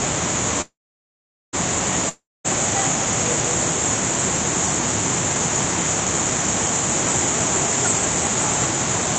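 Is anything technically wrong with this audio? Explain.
Yes, two faults interrupt this everyday sound recording.

From 0.61 to 1.55 s there is a call audio freeze: the sound stretches into a brief fading buzz, then near-silence, likely from delayed packets draining the jitter buffer. The waveform flattens for about 0.8 s before resuming exactly where it stopped.

From 2.09 to 2.46 s a long network dropout, likely lost packets, leaves a fading tail, then about 0.23 s of blank spectrogram, and the audio returns with roughly 0.36 s missing.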